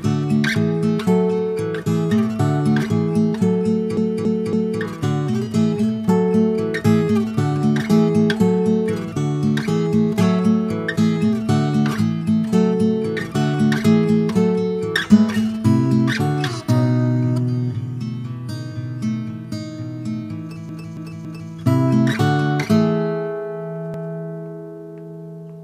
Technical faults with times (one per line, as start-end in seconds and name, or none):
3.97-4.81 repeated frames
20.69-21.53 repeated frames
23.94-24.13 repeated frames